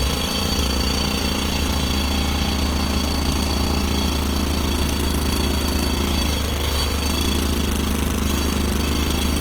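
From start to finish the everyday sounds come across noisy, rough and grainy: tonal parts dissolve into a hiss-like texture rather than swirling, and the damage is plainly audible. The likely cause is Opus compression in its CELT music mode, at a rate that points to roughly 24 kbps, with starved bands refilled by folded or noise content. On a spectrogram, energy stays fullband up to 20.1 kHz with few holes, but fine harmonic lines smear into speckled, noisy patches.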